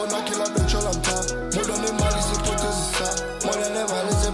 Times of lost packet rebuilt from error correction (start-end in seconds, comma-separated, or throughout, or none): none